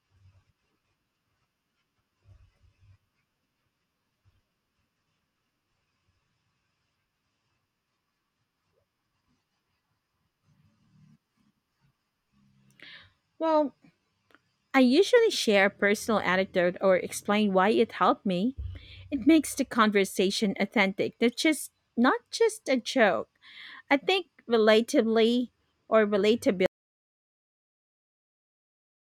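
Audio dropout to silence begins at 26.66 s and runs to the end of the speech clip. The sound stops abruptly mid-flow and does not return; what follows is silence, with no room tone or background hiss beneath it. The likely cause is a loss of the input signal, such as a disconnected device, a failed link or an accidental mute, while recording carried on writing silence. Whatever was spoken during those final seconds is lost.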